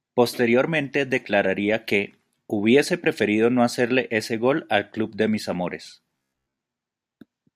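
From 6.16 to 6.58 s the speech turns into robotic sound from repeated short buffers, a rigid metallic buzz at 66.8 Hz, likely from late audio being covered by looping a 15 ms slice. The spectrogram shows evenly spaced harmonic lines, and the waveform shows identical repeating cycles.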